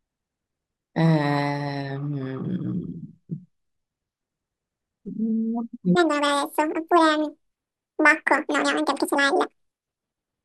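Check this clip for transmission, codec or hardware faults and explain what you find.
One fault stands out. From 5.95 s to the end, a section at the wrong speed: the speech runs at 1.98 times its original rate, likely from being fitted to the wrong clock, so pitch rises about ten semitones and timing rushes together, unlike a pure pitch shift, which leaves pacing intact.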